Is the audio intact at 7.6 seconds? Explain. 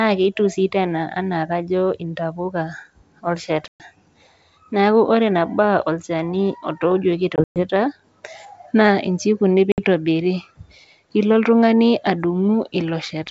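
No. Packet loss on an ADPCM call hits 7.36 to 7.67 s. Several packets, about 140 ms in all, drop out over 200 ms, the longest run 120 ms, leaving hard-edged silences. Each gap desynchronises the decoder's predictor and step size, so the sound resumes slightly distorted before settling.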